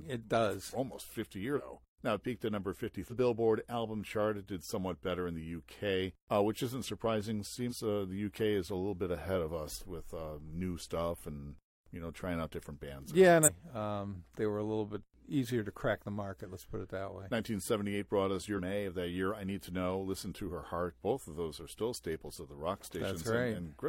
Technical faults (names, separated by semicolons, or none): damaged data in a compressed stream